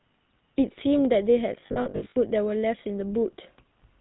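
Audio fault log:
throughout, GSM full-rate codec: plainly audible buzzy, gravelly roughness, with nothing above 4 kHz, which fits the 13 kbps full-rate codec. Pulse-driven vocal-tract modelling causes the grit; unlike a simple telephone band-limit, the texture itself is coarsened, not just dulled.
1.6 to 2.17 s, lost GSM frames: about 340 ms of losses scattered across 560 ms, runs no longer than roughly 70 ms. Each gap is filled by the last good frame repeated, so the sound briefly holds as a rough metallic ring rather than dropping to silence.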